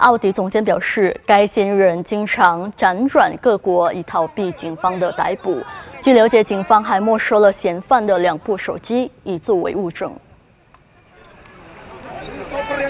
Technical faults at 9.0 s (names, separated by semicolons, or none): none